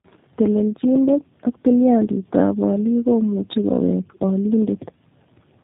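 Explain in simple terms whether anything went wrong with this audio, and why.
Yes, tandem speech coding: throughout, the speech was squeezed by two phone coders in turn, sounding rougher and more warbly than one alone, with nothing above 3.8 kHz.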